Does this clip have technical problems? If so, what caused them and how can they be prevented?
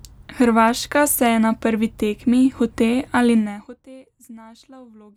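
Yes. Zipper noise from 3.33 to 3.84 s: the level falls by roughly 25 dB in 1 dB steps, about fifty a second, each step clicking audibly. Smoothing or ramping gain changes per sample, rather than jumping per block, prevents it.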